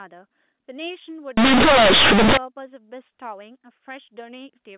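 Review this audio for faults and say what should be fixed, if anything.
From 1.37 to 2.37 s, companded audio read as linear: A-law bytes are played as raw 8-bit samples without expansion, giving loud, buzzy distortion and noisy pauses, unlike clipping, which flattens only the peaks. Around it, the A-law telephone coding plays correctly, limited to 4 kHz. To prevent it, check that every G.711 stream is flagged as A-law and decoded through the expander before playback.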